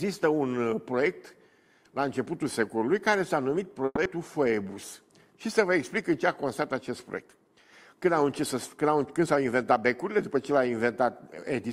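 A call audio freeze runs from 3.85 to 3.98 s. The sound stalls and the last moment is stretched into a fading buzz that ends in about 30 ms of silence, 110 ms filled in all. This is likely packets held up in transit that emptied the jitter buffer. When they arrive, the audio resumes where it stopped, 110 ms later than before, with nothing lost.

A skip ahead follows between 4.04 and 4.07 s. Roughly 70 ms of audio was dropped, either in transit or by an overflowing jitter buffer, while later material was already queued. Playback jumps forward across only a 10 ms bridge, so the two sides are joined almost directly.

A jitter buffer slow-down spans 4.28 to 4.75 s. With its reserve running low or its target delay just raised, the receiver repeated single pitch periods and bits of pauses many times over, adding 74 ms. The audio plays at 86% speed while keeping its pitch, so sounds come out drawn out.

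A jitter buffer speed-up runs from 9.05 to 10.17 s. The buffer held more audio than its target, so the receiver cut out short pieces of one or a few pitch periods in succession, about a tenth of a second in total. The audio runs at 109% speed at unchanged pitch and sounds hurried.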